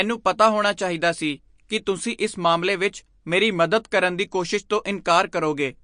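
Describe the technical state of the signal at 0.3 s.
At 0.3 s the speech carries MP3 compression artefacts, present throughout the clip: nothing remains above 9.8 kHz, and weak spectral lines flicker between frames, giving a watery, swirly texture and smeared onsets. This is likely a low-bitrate encode, consistent with roughly 48 kbps.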